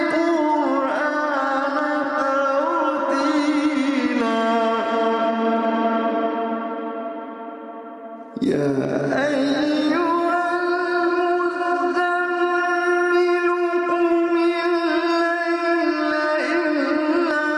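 Gain pumping runs throughout, with the gain swinging about 20 dB. Loud and soft parts sit closer in level, and the sound is squashed. The likely cause is excessive input gain driving a fast limiter.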